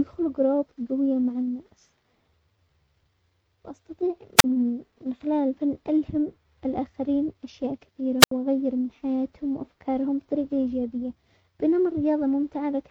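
At 4.37 to 4.44 s and again at 8.20 to 8.31 s the speech suffers a wireless microphone squelch dropout. The FM link weakens, a short burst of hiss swells, and the receiver's squelch mutes the output for about 38 ms and then 76 ms before the voice returns. Unlike a digital packet-loss gap, which cuts abruptly without warning, these holes are preceded by that rising static.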